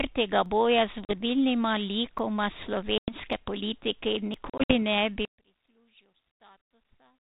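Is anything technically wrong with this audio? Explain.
Yes. This speech recording, carried over a 32 kbit/s G.726 ADPCM link, has three kinds of fault.

Dropped buffers (overrun) occur at 0.46 s, just before "boja z", and at 2.19, 3.33, 4.34 and 5.68 s. The 4.34 s event comes just before "ne bi", and the 5.68 s event just after "ne bi". Each one is a small forward jump in the sound. There is no gap. Most losses are around 10 ms, but the one at 4.34 s is closer to 30 ms. The likely cause is software failing to read its samples before the hardware overwrote them. The two sides then butt together directly.

Packet loss on the ADPCM call opens hard-edged silent holes. The first runs from 1.05 to 1.13 s and loses 40 ms. The second runs from 2.98 to 3.13 s and loses 100 ms. From 4.50 to 4.77 s, 120 ms is lost in pieces over about 200 ms, and the longest piece is 60 ms. While the gaps last, the decoder's adaptive predictor and step size drift away from the sender's. 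The speech then comes back slightly distorted. It settles within a few tens of milliseconds.

From 5.25 s to the end, one channel is inverted. The likely cause is a polarity reversal on one side of the stereo pair. When the two channels are summed to mono, the content they share cancels. The level drops by about 33 dB. The centred speech nearly disappears, and only a faint residue of the difference between the channels remains.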